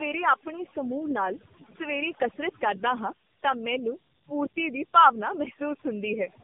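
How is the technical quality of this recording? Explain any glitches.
The technical quality is poor: two faults run through the whole recording, one clearing the background and one degrading the speech itself.

Overdone noise removal affects the entire clip. A noise reducer set far too hard has pulled individual frequency bands down to nothing wherever they sat close to its noise estimate, taking the softer parts of the speech along with the hiss. The result is a near-silent background dotted with twinkling specks. Unlike plain low-level gating, which cuts everything at once, this removes narrow bands independently, so the artefacts sparkle rather than pump.

Tandem speech coding is also present from start to finish. The speech passed through a narrowband mobile speech coder twice, with a plain telephone-rate link between, and each pass re-encoded the damage left by the one before. The bandwidth stops at about 3.5 kHz, and the rough, muffled, warbly texture fits two AMR-NB stages at a low rate. 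A single codec pass would sound band-limited but cleaner. The extra roughness and warble are what point to two generations.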